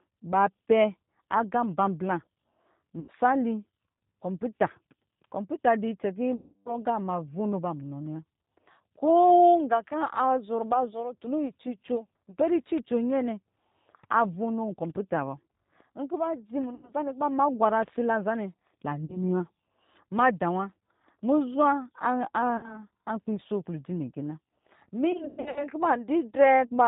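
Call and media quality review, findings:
G.729 codec across the whole call: narrowband, nothing above 4 kHz, plainly rough and synthetic. That's the 8 kbit/s model rebuilding speech from a vocal tract filter, pitch predictor and sparse pulses.

VoIP packet loss concealed by the speech codec at 3.00–3.12, 6.36–6.79 (300 ms, worst), 16.75–16.92, 19.05–19.19, 22.57–22.84, and 25.12–25.65 (scattered, longest gap 120 ms). The decoder stretches its last frame into a fading buzz or coloured noise, and the speech stays weak briefly after each gap.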